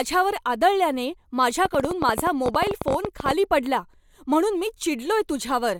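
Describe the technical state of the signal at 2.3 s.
A train of clicks runs from 1.66 to 3.32 s, just before "पडला म्हणून मी": around thirty similar pulses at an uneven 15 per second, peaking about 15 dB above the speech. They are heard as popping ticks, likely from interference or a faulty connection or power supply.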